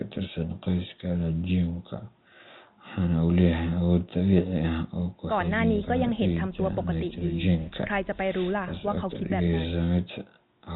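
No technical faults can be heard in this speech recording.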